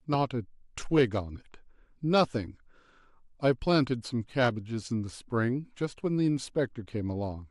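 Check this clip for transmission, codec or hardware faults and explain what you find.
The clip carries a codec fault running from start to finish. The likely cause is MP2 compression at a starved bitrate. The audible damage fits roughly 80 kbps: too few bits to cover all 32 sub-bands, so upper bands drop out and flicker back while the rest are coarsely quantised. The speech sounds dull and muffled, with a gurgling, granular roughness throughout.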